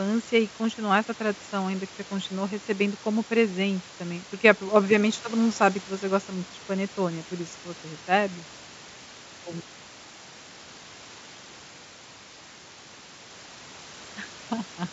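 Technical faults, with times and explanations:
No technical faults can be heard in this speech recording. Room noise sits about 22 dB below the speech, and the G.722 wideband telephone coding at 64 kbit/s carries the speech up to 7 kHz with at most a faint hiss in the upper band.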